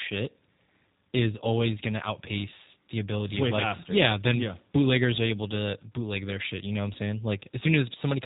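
From start to finish, the speech carries G.729 codec damage, and it is plainly audible. Everything above 3.8 kHz is gone, so consonants lose their edge. The low bitrate, which fits 8 kbit/s, rebuilds each frame from a few pulses. The result sounds rough and slightly synthetic.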